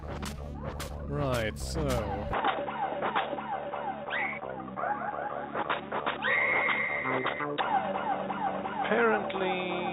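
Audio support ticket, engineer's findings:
Dull, boxy from 2.33 s to end, no gap; nothing above 3.8 kHz, level shifts a few dB. Likely input switched to a poorer device.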